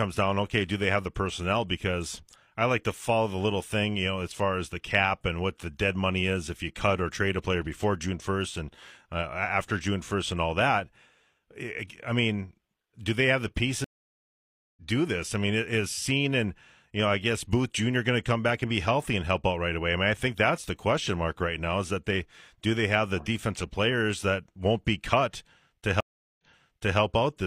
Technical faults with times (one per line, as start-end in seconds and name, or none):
13.84-14.82 stream reconnect
26.00-26.99 stream reconnect